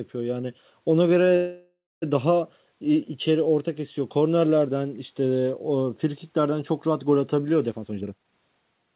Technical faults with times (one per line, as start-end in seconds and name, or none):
1.36-2.04 call audio freeze
7.71-8.94 jitter buffer speed-up